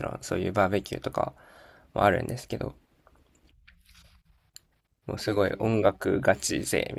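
From 5.18 s to the end, computer activity noise appears: processor or peripheral load disturbs the audio circuit's shared ground, adding a faint chirping buzz pulsing at around 150 Hz, roughly 35 dB below the speech, independent of it. On a spectrogram, it shows as evenly spaced vertical striations.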